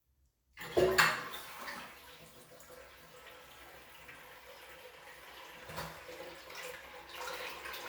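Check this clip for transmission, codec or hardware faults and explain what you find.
No transmission, codec or hardware faults found here.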